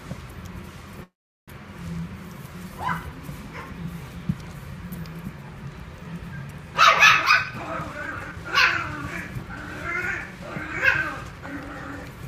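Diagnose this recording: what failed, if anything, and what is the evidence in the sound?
Network stage: a call audio freeze runs from 1.03 to 1.50 s. The last sound stretches into a brief fading buzz, then about 0.39 s of silence, and the audio resumes exactly where it stopped with nothing lost, likely because delayed packets drained the jitter buffer. A spectrogram shows a smeared, decaying band and then a blank column, and the waveform flatlines.

Buffer stage: a jitter buffer speed-up spans 7.26 to 8.43 s. The audio plays at roughly 129% speed at unchanged pitch and sounds hurried, as the receiver cut short pitch-period slices, around 0.4 s in total, to shed built-up delay. Spectrogram harmonics stay at the same frequencies while events crowd closer together.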